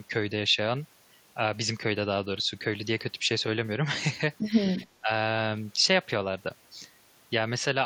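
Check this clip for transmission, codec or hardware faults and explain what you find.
One fault stands out. Between 4.84 and 5.1 s the speech briefly dips by about 15 dB, roughly a tenth of a second in all. This is speech suppressed in double talk, likely from an echo canceller that treated overlapping talk as echo and attenuated it.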